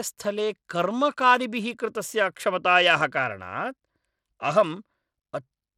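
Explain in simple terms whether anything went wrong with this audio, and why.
Throughout the clip, the speech sounds gritty, with the top end thin and flickering and nothing at all above 17.4 kHz. That points to Bluetooth SBC compression: the simple wireless codec likely starved the highest frequencies of data and coarsely rounded the rest.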